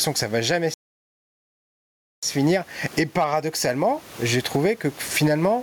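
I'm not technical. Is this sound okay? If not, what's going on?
No. There are two problems.

The first is a playback stall. Just after "que ça va jamais", at 0.74 seconds, the speech stops dead and the output goes completely silent for about 1.5 seconds, until 2.23 seconds, then carries on. The player most likely ran short of data or was held up. Unlike a dropout, where a tiny slice vanishes, this is a long pause with nothing at all coming out.

The second is gain pumping, heard across the whole clip. Loud and soft parts end up closer in level, so the sound comes across squashed. The likely cause is a microphone level set far too high, with an automatic limiter pulling it down on every loud moment.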